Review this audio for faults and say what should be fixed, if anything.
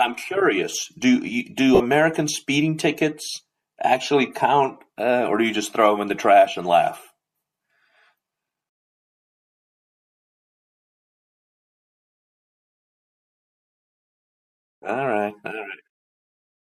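Lost LE Audio frames, 1.75 to 1.80 s: the decoder filled the 50 ms gap with a sign-scrambled copy of the last spectrum, so speech briefly smears into noise. Improving the Bluetooth link margin, for example by cutting interference or allowing more retransmissions, would stop these frames from dropping.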